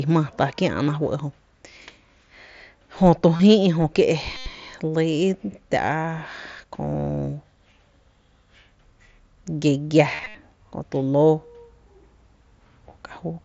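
Concealed Bluetooth headset packet loss hits the speech at 3.36–3.40 s (30 ms), 4.37–4.46 s (90 ms), 10.15–10.35 s (135 ms lost in bursts, longest 68 ms) and 12.49 s. The receiver repeats the last waveform stretch, so longer gaps buzz at full level and warble on recovery, rather than falling silent like plain dropouts.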